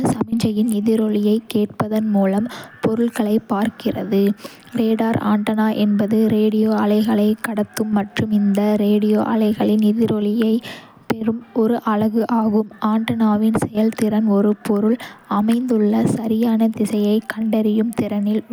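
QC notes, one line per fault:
No faults heard anywhere in this recording.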